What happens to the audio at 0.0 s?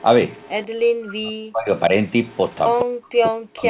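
A very faint copy of the speech, delayed 162 ms, sounds from 0.00 to 0.04 s. It is likely an echo leak: loudspeaker pickup the other side's echo canceller missed.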